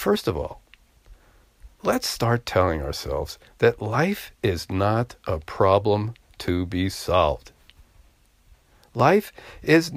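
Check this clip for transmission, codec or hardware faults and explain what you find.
Clock drift buffer slips occur throughout the speech, from 0.17 s to about 9.0 s, as a regular click or pop roughly every 1.26 s. The likely cause is two devices running on separate clocks that disagree by something on the order of 700 ppm. The buffer between them gradually overfills or runs dry, and each time it reaches its limit a block of around 50 samples is dropped or repeated. That abrupt splice in the waveform is heard as an evenly spaced tick.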